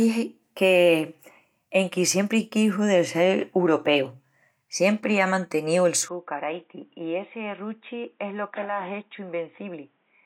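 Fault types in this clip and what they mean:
Input switched to a poorer device: after "siempri á manteníu el", at 6.08 s the speech drops about 10 dB, loses everything above 3.8 kHz and gains a new, faint noise floor with no gap, likely a different microphone. Unlike plain filtering, level, tone and noise all change together.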